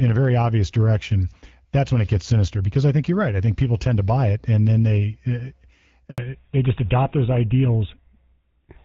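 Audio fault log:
6.10 to 6.18 s, handover gap. The sound dies away and goes silent for 80 ms while the call switches networks. No speech frames arrive during the switch, so whatever was said then is simply lost. The new link then picks up.
6.18 s to the end, fallback to narrowband. Everything above 4 kHz disappears from here on. The call drops from HD Voice, with AMR-WB at 12.65 kbit/s, to a narrowband codec that fits GSM full rate. The voice turns duller and rougher.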